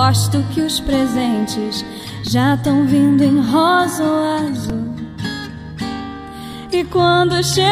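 Repeated buffers cause brief clicks or buzzes at 2.27, 4.70 and 6.53 s. Each time, a 2.67 ms piece replays while new audio runs late, which fits a 128-sample buffer.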